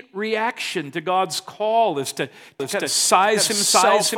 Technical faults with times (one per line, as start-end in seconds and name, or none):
2.60-4.18 doubled audio track